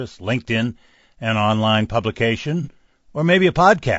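From start to finish the speech carries a rough, grainy texture, with a hiss filling the gaps between the voice's harmonics and a top end that sounds thin and a bit synthetic. That's likely low-delay AAC compression, the AAC-ELD kind used for video calls. At a modest bitrate, which here sounds like something around 32 kbps, its coarse coding leaves the damage plainly audible.

At 2.63 s a brief patch, lasting until about 2.68 s, goes smeared and noisy. That's AAC frame loss with concealment. Roughly 30 ms of audio went missing, which fits a single lost frame, and the decoder patched the gap by reusing the last good spectrum with some randomisation. Because the hole is so short, you get that blurry, noisy patch rather than a dropout to silence.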